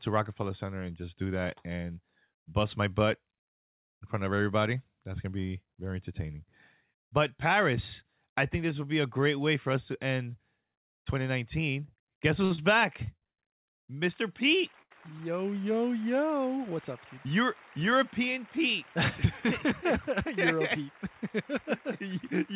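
Repeated stalls (stutter) run from 12.45 to 13.39 s. Packets reached the receiver late, so its jitter buffer ran dry five times in under a second. Each time, the receiver extended the last sound to cover the wait. The longest fill was 119 ms, and in the longer waits the held sound fades. In total about 274 ms was filled in, close to a third of that stretch. Nothing is lost, but the sound catches and drags in small hiccups before it moves on.

A short stall from a late packet follows at 14.82 to 14.92 s. One packet was missing when it was due, the buffer emptied, and the receiver held the preceding sound for 82 ms. When the packet arrived, playback resumed exactly where it left off, so nothing is skipped. The result is one sound lingering a beat too long, with a faint buzzy, slightly sagging quality. That delay stays in the stream afterward.

A jitter buffer speed-up comes between 17.25 and 18.58 s. 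The buffer now held more audio than it wanted, and the receiver began trimming it back. It cut many tiny slices, each a pitch period or a few, and removed about 50 ms overall. Playback runs at 103% of normal speed while pitch stays put. Throughout the clip the band stops at 4 kHz, which points to G.711 mu-law at 64 kbps.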